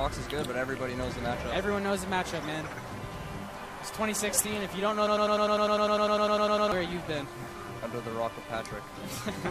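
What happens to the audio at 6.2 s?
At 6.2 s the audio is caught in a broken-record loop running from about 5.07 s to 6.72 s: a fragment of roughly 0.10 s repeats exactly, back to back, 16 times, giving a stuttering, machine-gun buzz in place of the intended audio, which is lost. A stalled player, encoder or stream re-sending its last held fragment is the likely cause. On a waveform the same 0.1 s shape tiles identically; a spectrogram shows a repeating block pattern with regular vertical seams.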